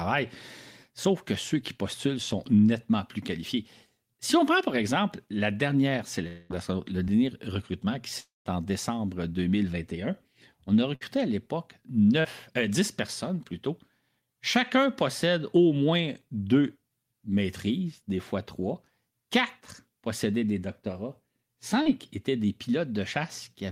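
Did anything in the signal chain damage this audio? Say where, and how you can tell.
Yes, the damage happened in the network stage, in three distinct ways.

Two long gaps, at 6.27 to 6.52 s and 8.20 to 8.47 s, are likely long network dropouts. About a quarter-second of audio is lost each time. The second gap decays into roughly 170 ms of silence before the sound resumes, which is longer than a burst.

Short concealed packet loss appears at 7.04 to 7.08 s, 12.21 to 12.26 s and 21.82 to 21.88 s. Each loses 20 to 40 ms, which the receiver bridges by extending the preceding sound. The result is a brief smear or wobble.

A burst of packet loss at 10.95 to 11.03 s removes about 60 ms. The concealment holds the last sound and turns it down as the gap continues. It is longer than the short patches.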